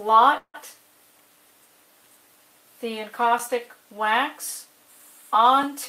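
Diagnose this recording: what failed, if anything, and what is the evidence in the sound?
From 0.37 to 0.56 s the sound stalls into a fading buzz that ends in about 60 ms of silence, then resumes where it left off, 165 ms later than before with nothing lost. This is a call audio freeze, likely from network packets arriving late and draining the jitter buffer.

At 3.39 s there is a tick or dip: the audio drops for about 9 ms to digital silence with hard edges and no fade. This block of digital silence points to the driver or buffer stage, where an output buffer was not filled in time and played as zeros.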